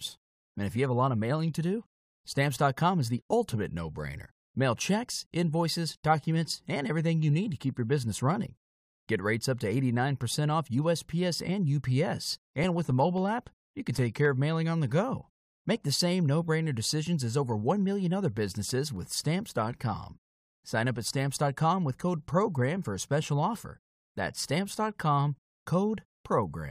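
Speech clip with CD scratch ticks from 12.37 to 14.52 s, just before "on the go", and from 18.70 to 20.04 s, after "million other": regular ticks, about four a second, where each disc turn's unrecoverable data is patched. The spectrogram shows evenly spaced thin vertical broadband lines; the waveform shows brief notches, the longest a few milliseconds.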